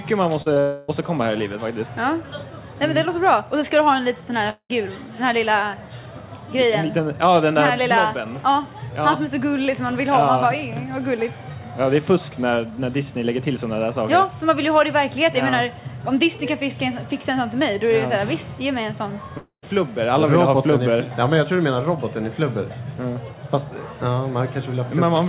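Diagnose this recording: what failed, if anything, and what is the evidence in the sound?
The fault is in the network stage: short concealed packet loss at 0.42 to 0.48 s (about 40 ms) and again at 0.54 to 0.58 s (20 ms). The receiver's decoder bridged each gap by extending the preceding sound, so each is heard as a brief smear or wobble. On a spectrogram each shows as a short patch where the harmonic or noise pattern freezes and repeats, then blends into the real signal. Everything sits below 4 kHz, which fits a G.711 narrowband call path.

Three longer gaps are likely caused by a long network dropout. They come at 0.60 to 0.90 s, directly after the second short loss, then at 4.50 to 4.71 s and at 19.37 to 19.64 s. Each time concealment carries on as a synthetic buzz or hiss that fades. The first is filled almost entirely. The second fades to silence for its last 70 ms or so, and the third for about 110 ms. 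On the waveform the envelope goes smooth and decays, then drops to flat silence in the later two before the audio resumes with the missing stretch gone.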